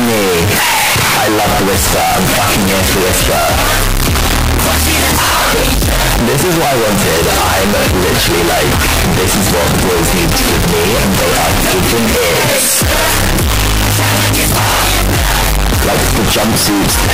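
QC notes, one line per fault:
Throughout, float read as integer: the audio was likely stored as 32-bit floating-point samples but decoded as 32-bit integers, so each sample's sign and exponent bits, not its actual amplitude, set the output level. The waveform flattens into a near-square shape at an almost fixed, high level, regardless of how quiet the source was. The result is extremely loud and harsh, with quiet background material raised to the same level as the main sound.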